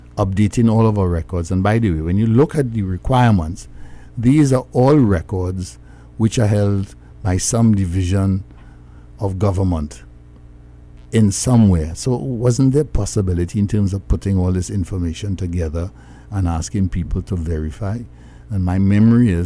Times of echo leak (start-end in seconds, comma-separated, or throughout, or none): none